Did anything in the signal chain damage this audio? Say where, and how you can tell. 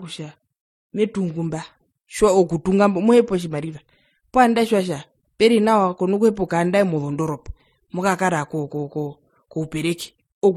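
Yes, at the codec stage, across the whole clip. The speech carries two layers of compression damage together: a swirly, smeared quality in the upper band sitting on top of a grainier, watery texture, with no content above 18.4 kHz. This is likely transcoding between lossy codecs, which fits a low-rate MP3 re-encoded as HE-AAC at a similar rate. The second encoder wastes bits reproducing the first one's artefacts while adding its own.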